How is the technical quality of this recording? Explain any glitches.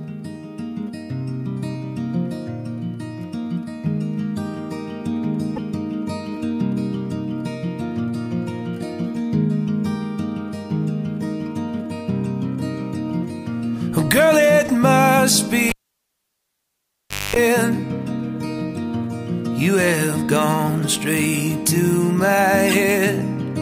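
The recording has two kinds of fault: damaged compressed frames that were decoded anyway, heard twice, and one cable that was pulled out and reinserted mid-clip.

Corrupt frame decoded, 5.56 to 5.58 s and 22.67 to 22.72 s: flipped bits inside compressed frames went undetected, so the decoder rebuilt a couple of frames, then a few, from wrong gains and codes. Energy lands at the wrong frequencies, heard as brief chirps or noise blips peaking around -15 and -10 dBFS.

Cable pulled and plugged in, 15.69 to 17.36 s: a live connection was broken and remade. A pop marks the disconnect, then about 1.6 s of near silence, then roughly 0.23 s of 50 Hz mains buzz as the plug's tip makes contact alone, and a second pop when the sound returns.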